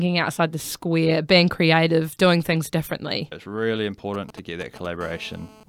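Speech, with two bursts of mobile-phone interference near the end. From 4.14 to 4.87 s there are GSM signalling bursts: a galloping dit-dit-dit of short buzzes at 217 Hz, roughly 15 dB below the speech. A nearby 2G handset is sending brief groups of radio bursts while signalling, and the audio circuit rectifies each pulse into sound. From 5.01 to 5.64 s a steady GSM phone buzz follows, a hard, raspy 217 Hz tone rich in harmonics at about 24 dB below the speech. It matches a handset in an active call transmitting in bursts 217 times per second, with those pulses rectified into the audio path.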